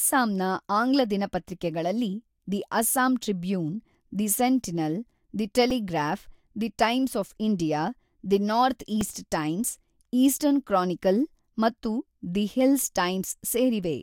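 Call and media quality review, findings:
Brief clicky buzz at 5.70 s after "ದಿ ಸೆಂಟಿನಲ್ ದಿ", single click at 9.01 s between "ಆಫ್ ಇಂಡಿಯಾ ದಿ ನಾರ್ತ್" and "ಈಸ್ಟ್ ಟೈಮ್ಸ್ ಈಸ್ಟರ್ನ್ ಕ್ರಾನಿಕಲ್". Repeated buffer in the playback path: a 2.67 ms slice, which fits a 128-sample buffer, replayed three times, then once, when fresh audio arrived late. A few milliseconds of speech lost each time.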